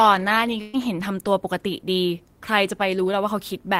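At 0.61 s there's a burst of packet loss: the receiver stretches the last sound, fading it for about 120 ms, then jumps ahead with that stretch of speech gone.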